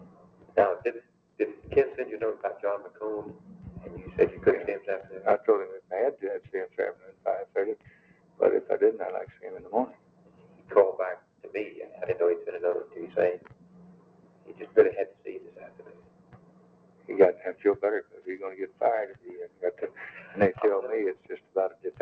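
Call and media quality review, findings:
Noise suppressor applied to music or sounds, throughout. Speech-tuned suppressor treating sustained tones, ambience and reverb tails as noise; level swings of around 20 dB, attacks passing, held material sinking, giving audible pumping and thinning. Band-limited to 8 kHz, consistent with a G.722 path at 64 kbps.

Sound cut by the noise suppressor, at 0.05–1.39 s, 6.44–8.4 s, 9.34–11.44 s, 13.39–19.62 s, and 21.15 s to end. Same suppressor misclassifying steady or decaying content; drops of up to about 12 dB, tails truncated. Roughly a second affected in each of the first three windows, about four seconds in the long one.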